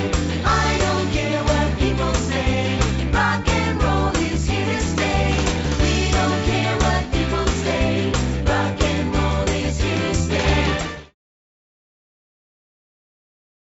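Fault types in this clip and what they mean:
No faults present: content stops at 8 kHz, which fits a G.722 call path at 64 kbps, and the fade-out beginning around 10.5 s and ending at 11.15 s is intentional and smooth.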